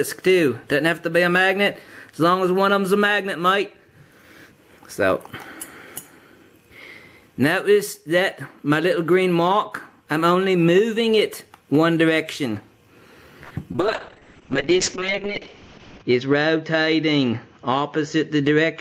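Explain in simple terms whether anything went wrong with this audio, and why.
Yes, several things went wrong, all from the network connection.

At 13.43 to 13.53 s, a short stall from a late packet froze the audio. The receiver held the last sound for about 71 ms until the delayed data arrived.

Right after, at 13.73 to 13.76 s and 13.76 to 13.80 s, two short concealed packet losses occurred. Each time about 20 ms never arrived, and the gap was patched with guessed sound, causing a brief smear.

From 13.81 s to the end, a call bitrate drop made the encoder use far less data. Sound above about 8 kHz is cut off, so the audio turns muffled and rough.

From 16.03 to 16.88 s, a jitter buffer speed-up trimmed roughly a tenth of a second of backlog. The audio plays about 9% faster at the same pitch and sounds hurried.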